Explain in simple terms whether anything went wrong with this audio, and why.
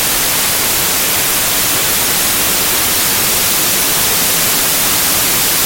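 Samples built from the wrong bytes, from start to finish: the whole clip comes out as loud hiss, like static. Each sample in a digital file is stored as a few bytes, and here the player has stitched those bytes together wrongly, in the wrong order or offset by one. The tiny, fast-changing details end up treated as the main loudness, so what should be the sound becomes noise.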